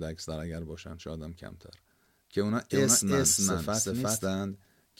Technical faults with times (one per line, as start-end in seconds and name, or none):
2.70-4.28 doubled audio track